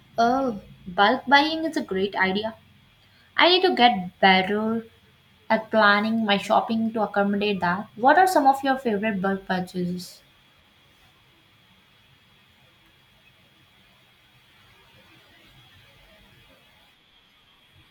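No technical faults can be heard anywhere in the recording; the speech signal stays steady and intact throughout.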